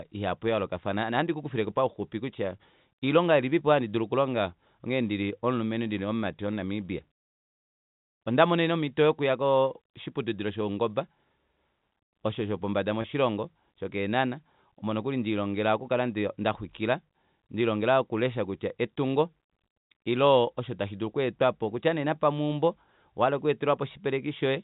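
Speech carried over G.711 telephone coding, which caps the bandwidth at 4 kHz, has one packet-loss dropout with pitch repetition from 13.02 to 13.04 s. The gap lasts about 20 ms, which fits a single lost packet, and the receiver bridges it by repeating the last pitch period, so the sound briefly holds on a slightly buzzy tone. On a waveform, that stretch shows identical repeating cycles. On a spectrogram, the harmonics run flat and unchanging for that instant.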